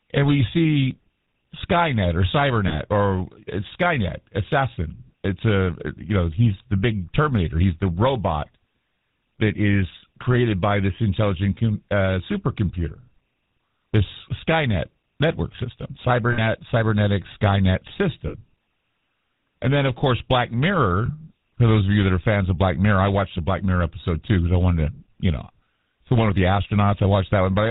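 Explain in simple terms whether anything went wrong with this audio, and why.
Yes, two things went wrong. The whole recording passed through the GSM full-rate codec, the compression used by early digital mobile phones. It rebuilds speech from a rough model of the throat and mouth, driven by regular pulses. It drops everything above 4 kHz. The voice sounds buzzy and gravelly throughout, with the dull, boxed-in tone of an old phone call. This damage is easy to hear.

There are also lost GSM frames, short stretches where pieces of the signal never arrived. The phone filled each hole by repeating the last good piece. You hear a brief rough, metallic ring. This happens at 2.68, 16.32 (just after "network system"), 18.28 and 21.06 seconds. The two middle dropouts are longer.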